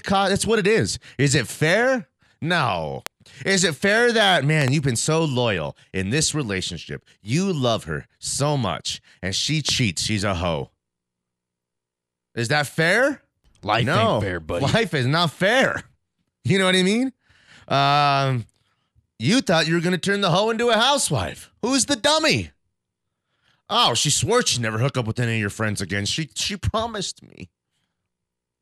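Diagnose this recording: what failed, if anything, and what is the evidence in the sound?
Loud pops hit at 3.06–3.09 s, a double at 4.62–4.70 s, and 9.69–9.71 s, roughly 20, 15 and 10 dB above the speech. Likely a voltage step in analogue wiring.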